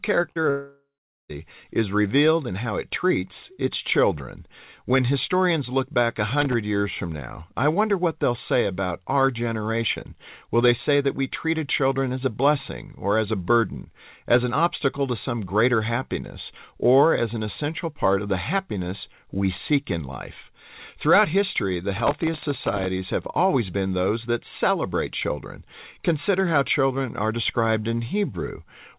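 Right at the start, 0.32 to 0.38 s and again 0.42 to 0.46 s, there's short concealed packet loss: bits of the call arrived late and got patched over, so you hear quick smeary wobbles. From 0.50 to 1.31 s it's a long network dropout, likely: the last sound drags on as a fading buzz, then just under half a second of silence, and the audio resumes with a chunk missing. At 6.30 to 6.54 s and again, longer, at 21.97 to 22.86 s, there's processor overload crackle. The machine kept missing its deadlines for very short buffers, a millisecond or two each, and replayed stale audio, so you get a gritty tearing over the sound. All of this sits on a call path that stops at 4 kHz, which fits G.711 mu-law.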